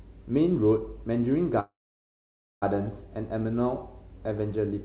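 From 1.6 s to 2.64 s there is a call audio freeze, most likely because packets stalled in transit and the jitter buffer ran dry. The receiver briefly carries the last sound on as a fading buzz, then drops to near silence for about 0.9 s. When the packets resume, the speech continues where it stopped, with nothing lost but everything after arriving about 1 s late, still band-limited to 4 kHz by the call codec.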